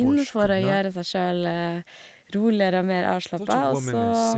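No technical faults are audible.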